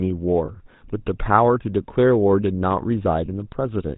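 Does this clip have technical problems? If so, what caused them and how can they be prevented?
Yes. The whole clip carries GSM full-rate codec damage: band-limited below 4 kHz, with a buzzy, gravelly roughness from pulse-driven vocal-tract modelling, consistent with 13 kbps coding. Using a wideband codec avoids this.

Lost GSM frames occur at 0.46–0.51 s and 3.26–3.29 s. Each is a short metallic ring where the previous frame was repeated, fitting a single 20 ms frame loss. Better channel protection or retransmission prevents this.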